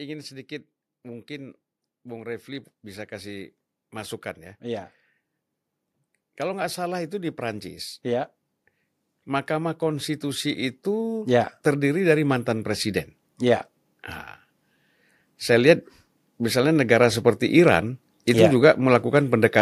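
A speech recording with automatic gain rising twice. From 1.02 to 4.93 s the level climbs by about 5 dB. From 6.37 to 13.13 s it climbs again, by about 11 dB. The background noise swells along with the voice each time. That shared, gradual lift is the mark of an automatic gain control. It judged the input too quiet and slowly raised its gain over several seconds.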